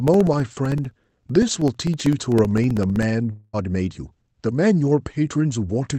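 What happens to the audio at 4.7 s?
Nothing goes wrong at 4.7 s: the speech continues intact through that moment, carrying only the ordinary coding texture and the roughly 8 kHz upper limit of the Opus call path it passed through.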